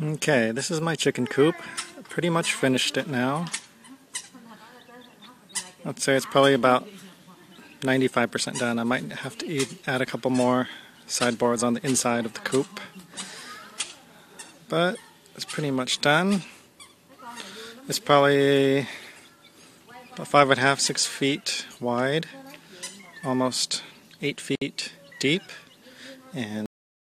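At 24.55 s the sound breaks off and a silence of about 63 ms opens, running to 24.62 s. This is a gap at a join of encoded pieces. The audio was encoded in separate parts and stitched together without trimming. The encoder's start-up delay and the padding of the last frame both stayed in. The edges of the gap are smeared by the codec. Afterwards the sound resumes exactly where it stopped.

At 26.66 s the clip has a cut-off end. The sound stops mid-event and falls straight to digital silence. There is no decay or fade. The final buffers were never written out or played, so the tail of the audio is simply missing. The silence holds from there to the last moment of the file, about half a second later.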